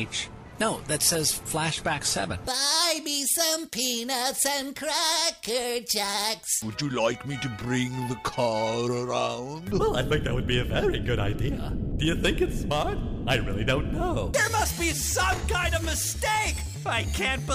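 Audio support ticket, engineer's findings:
No faults heard in this one, nothing on the playback or capture path that needs chasing, so the ticket can be closed from the audio side.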